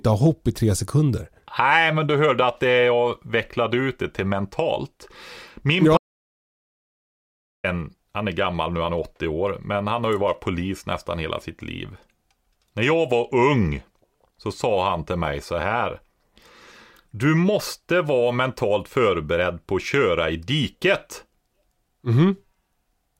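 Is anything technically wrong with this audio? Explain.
Yes. An audio dropout to silence runs from 5.97 to 7.64 seconds, just before "han är gammal nu". About 1.66 s of speech vanishes into silence, no room tone. The input was likely lost while recording continued.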